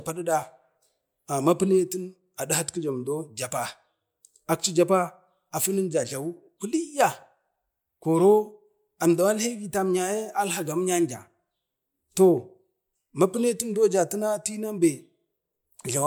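No technical faults can be heard at any point in the clip.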